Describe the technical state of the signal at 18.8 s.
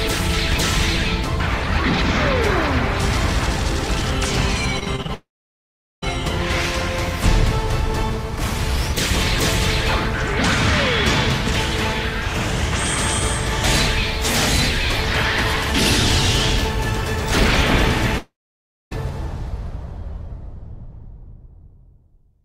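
At 18.8 s the audio is inside a long network dropout (18.18–18.93 s), likely from lost packets: a brief fading buzz, then a flat waveform and an empty spectrogram.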